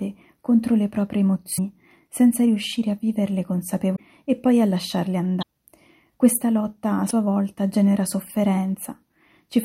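At 1.55 to 1.59 s, a short burst of damaged data cuts through the sound. It recurs at 3.95 to 4.00 s, 5.39 to 5.43 s and 7.07 to 7.11 s. Each burst lasts about 40 to 50 ms. This is damaged data in a compressed stream. Corrupt bytes reach the decoder, which misreads those frames and loses sync. It then hunts for the next valid frame header. Each gap comes out as a brief chirp or blip.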